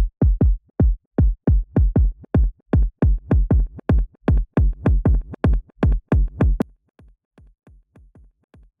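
From 6.62 s to the end, the audio collapses to a faint remnant, about 33 dB quieter. Nearly all of the sound, background included, all but disappears. This points to one channel inverted. One stereo side has likely had its polarity flipped. When the two sides are combined, the shared content cancels. Only the small difference between the channels survives, which is why the sound turns so weak.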